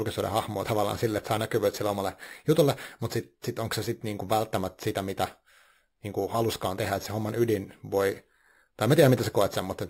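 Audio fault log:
throughout, imaging from sample-and-hold upsampling: a metallic fizz from 6 to 12 kHz, about 19 dB down, mirrors the speech. Unsmoothed repeated samples fit a 12 kHz source.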